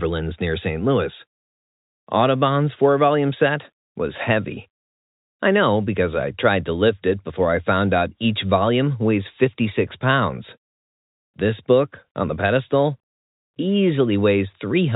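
Nothing stood out on listening to this speech, which carries the narrow, telephone-band sound of G.711 coding.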